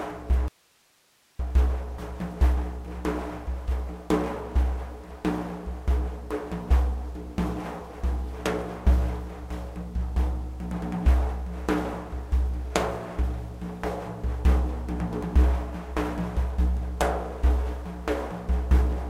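At 0.48 s the sound cuts off abruptly and only hiss remains, far below the normal level, until the audio snaps back at 1.39 s. This audio dropout to a faint residue of about 0.91 s likely reflects a lost signal while the path after the break stayed live.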